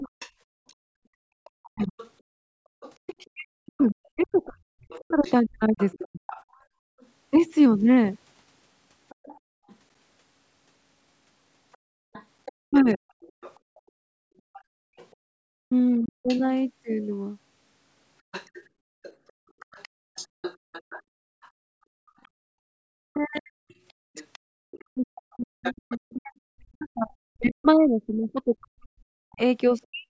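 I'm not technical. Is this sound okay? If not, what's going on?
No, there are two problems, and they tend to happen together when both people on a call talk at once.

Speech suppressed in double talk: the main voice sinks until it is almost silent, or drops out in pieces, from 0.0 to 6.32 s, 12.61 to 13.0 s, 15.62 to 16.29 s, and 22.6 to 30.08 s. In total about three seconds of the opening and five of the ending are affected. The likely cause is the call's echo canceller. It couldn't tell the talker apart from the other side playing on the loudspeaker, so it turned both down.

Other side's voice leaking through: a second, fainter voice sits underneath from 0.19 to 7.06 s, 9.09 to 9.74 s, 11.73 to 16.4 s, and 18.32 to 26.83 s. It is quietest around 9.1 s. This is likely the loudspeaker sound that the echo canceller failed to remove. The difference between the two problems is that in the first the main voice goes missing, and in the second an extra voice shows up.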